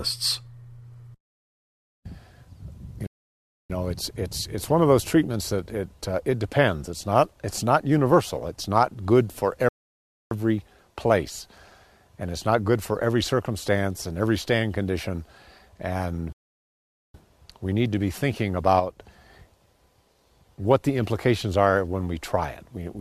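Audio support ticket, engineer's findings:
Rebuffering stall, three occurrences: 3.07 to 3.70 s (0.63 s), 9.69 to 10.31 s (0.62 s), 16.33 to 17.14 s (0.82 s). Audio halts to dead silence, then resumes from the exact point it stopped, adding time without losing anything. Points to a client buffer underrun. Waveform: flat silent gaps; spectrogram: fully blank vertical bands.

One channel drops out, 18.80 to 18.99 s, about 0.2 s. Sudden level fall of about 6 dB, then abrupt recovery. Likely a momentary loss of one stereo channel before mono summing. Waveform: brief step-down in envelope; spectrogram: uniformly dimmer short block.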